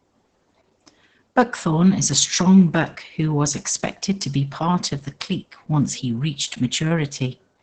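Opus voice compression runs throughout the clip, from start to finish. The speech has been squeezed through the codec's linear-prediction SILK mode at a low rate, and the heavy damage points to a bitrate around 10 kbps. The band is held to wideband, with nothing above about 8.9 kHz, so consonants lose their air and sparkle. With so few bits for the excitation, the speech sounds muffled, hoarse and faintly robotic.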